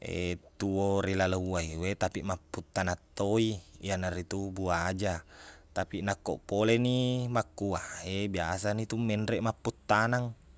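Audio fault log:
No faults can be heard in this speech recording. There is nothing to log.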